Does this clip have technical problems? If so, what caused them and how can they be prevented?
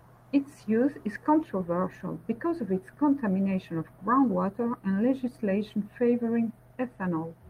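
No, there are no technical faults to report in this speech recording, so there is nothing to trace back or prevent.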